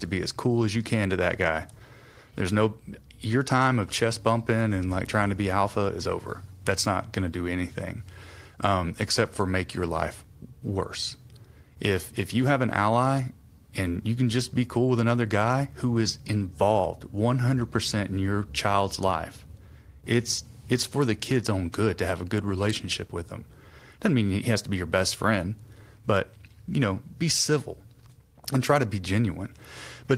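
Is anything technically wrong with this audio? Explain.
No, nothing technically wrong turns up anywhere in this recording, so there's nothing here that needs fixing.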